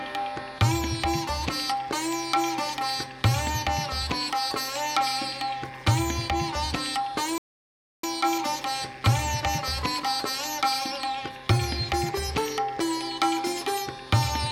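The audio cuts out dead at 7.38 s and stays silent until about 8.04 s, a gap of roughly 0.65 s. That's a playback stall, most likely the player starving for data or its output thread getting blocked long enough to drain the buffer. From 8.04 s to 11.04 s you get time-compressed catch-up: the player trims its backlog by snipping out short slices and cross-fading across the joins. That runs the audio about 1.1 times faster for three seconds. The pitch doesn't move, so it doesn't sound like a sped-up tape. It just feels hurried. After 11.04 s the pacing settles back to normal speed.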